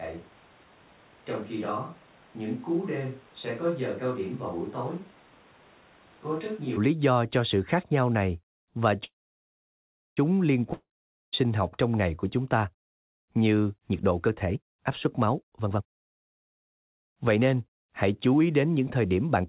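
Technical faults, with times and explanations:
0.0–6.76 s, switch to a distant microphone: from the start until "lý do cho sự", the sound is hollow, roomy and thin, about 10 dB quieter with audible room noise. A far microphone was likely used. The sudden return to close sound separates it from gradual reverb.
9.04–10.19 s, call audio freeze: after "khác nhau này và", a brief fading buzz gives way to about a second of near-silence. Speech likely resumes where it stopped, so it is delayed, not lost.
10.73–11.35 s, long network dropout: a short fading tail, then about half a second of silence before "học trong ngày của". Unlike the freeze, roughly 0.6 s of speech is likely missing, so the sentence jumps forward.
13.92–17.83 s and 18.26–19.45 s, jitter buffer speed-up: speech runs hurried at 123% and then 111% speed, with pitch unchanged. About a second is cut in the first stretch and a small fraction in the second, from trimming pitch-period slices.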